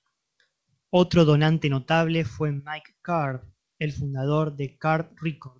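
A speech clip carried over a G.722 call path with nothing above 8 kHz, and nothing is technically wrong with it.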